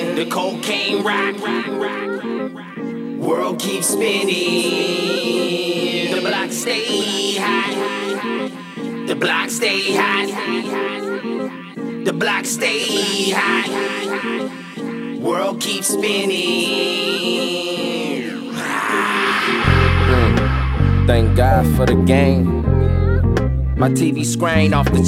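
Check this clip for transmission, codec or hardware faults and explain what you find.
Nothing in this recording points to a transmission, codec or hardware problem, so there's nothing to flag.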